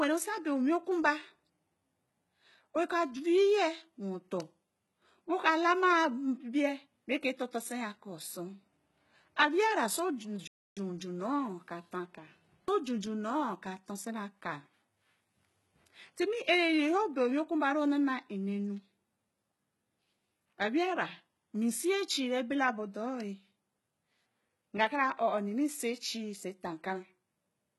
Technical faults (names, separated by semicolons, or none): HE-AAC compression; playback stall